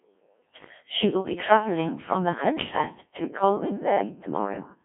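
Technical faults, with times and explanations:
Throughout, Codec 2 vocoder: the speech has a robotic, buzzy quality because the decoder rebuilds it from a pitch track, voicing decisions, energy and a coarse spectral envelope rather than keeping the waveform. The heavy damage fits a very low rate of about 1.3 kbit/s. On a spectrogram, energy is confined between 200 Hz and 3.5 kHz, with rigid, evenly spaced harmonics and smeared formants. The waveform looks unnaturally regular and periodic.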